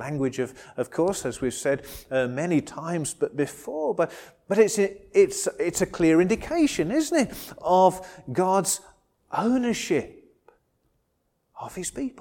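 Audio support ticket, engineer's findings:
Nothing stood out on listening, so no findings to log against this ticket.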